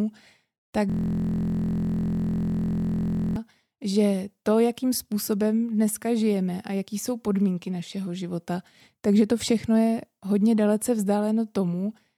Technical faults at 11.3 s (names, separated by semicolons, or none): none